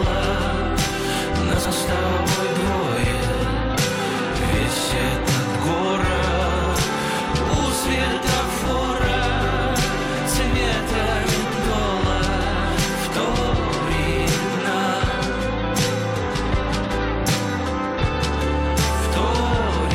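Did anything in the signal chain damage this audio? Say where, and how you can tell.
Yes. The damage happened in the network or transport stage, where frames out of order reached the decoder. Two neighbouring blocks were swapped, so the later audio plays before the earlier. This happens from 1.57 to 1.73 s and again from 11.44 to 11.64 s. The sound turns into a brief garbled flutter. Each half lasts about 70 ms and 93 ms respectively, which fits blocks of three and four codec frames. No time is lost.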